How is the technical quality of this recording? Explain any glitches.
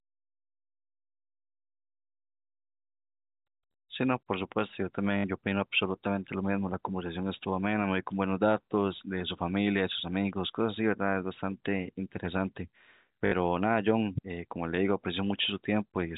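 The speech is carried as G.711 telephone audio, so nothing above 4 kHz comes through, and there are two brief glitches. At 5.18 to 5.24 s and again at 13.26 to 13.32 s, a 60 ms robotic stutter buzzes at about 50 Hz. This is packet loss with last packet repeated: the receiver kept replaying the last packet it had, a gap that fits three lost 20 ms packets.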